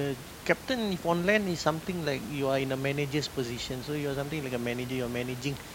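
No technical faults are audible anywhere in the speech.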